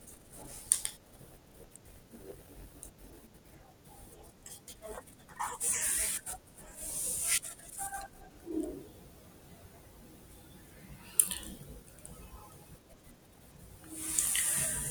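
From the start to about 3.56 s the speech carries a block size mismatch (padded): one stage hands over blocks slightly shorter than the next stage expects, and the remainder of each block is filled with silence. Those tiny gaps repeat at about 91.9 Hz, giving a steady buzz under the speech, and the speech runs at 0.919 times normal speed. What separates it from a sample-rate error is that the timbre stays put while the pacing slows.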